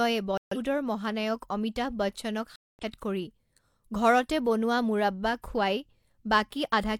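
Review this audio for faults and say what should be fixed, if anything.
Corrupt frame muted at 0.38–0.57 s and 2.56–2.84 s, just after "অমিতাভ বচ্চনক": the decoder rejected damaged compressed frames and the player substituted silence, leaving abrupt holes of several frame lengths with timing intact. Protect the stream with error detection and retransmission or forward error correction.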